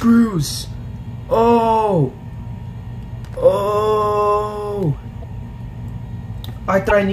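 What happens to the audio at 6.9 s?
Between 6.89 and 6.92 s the audio skips ahead with a brief garbled glitch, likely a broken MP3 bit reservoir, where frames after a cut read another frame's bytes.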